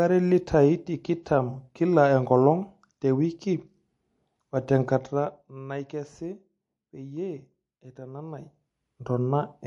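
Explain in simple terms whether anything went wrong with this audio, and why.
MP3 compression, heard throughout the whole clip: the speech has a watery, swirly quality, with hissy s sounds turning metallic and the top end sounding cut off. This likely comes from saving the audio as a fairly small MP3 file. The format divides sound into many narrow frequency slices and spends its limited data only where it expects you to notice. Quieter slices get dropped and flicker on and off, and the treble is trimmed away.

Pre-echo, at about 1.23 to 1.26 s: a short burst of hiss arrives just before a sharp attack in the speech, and the attack itself sounds soft and smeared. The codec handles sound in chunks of roughly 50 ms and spreads its noise evenly across each chunk. Here the sudden sound fell late in a chunk, so the noise meant to hide under the loud part leaked into the quiet moment just before it.

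Zipper noise, from about 4.85 to 5.67 s: while the speech is being turned down noticeably, a fast ticking or zipping sound rides on top of it. Instead of gliding smoothly, the volume drops in many small jumps, roughly forty per second. Each jump is an abrupt change that makes a tiny click, and the clicks run together into that buzzy zipper texture for as long as the level keeps moving.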